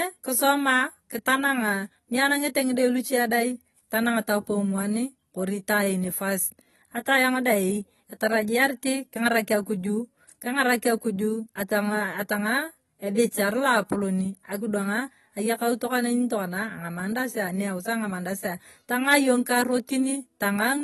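Speech that sounds dull and smeared throughout, with a fizzy, warbling texture on sibilants and sustained sounds and nothing above 12 kHz. That is AAC compression damage, likely from AAC-LC at a low bitrate, around 32 kbps, where the encoder drops the top band and starves the rest.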